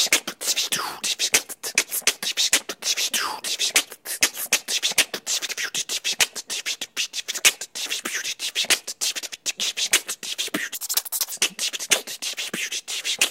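An everyday sound recording in which, from 10.75 to 11.32 s, the audio is read two samples at a time: each pair is taken as one frame, so the sound runs at double speed and a full octave (12 semitones) higher. The shift is exactly 2x.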